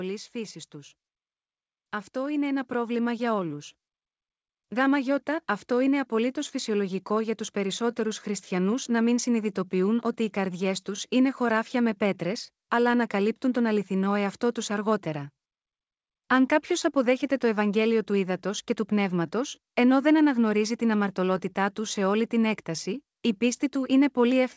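From 0.32 s to 23.14 s the speech and its background swell together by about 9 dB, an automatic gain rising as the control lifted a quiet input.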